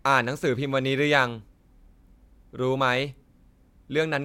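Speech recording, and nothing audible calls for correction.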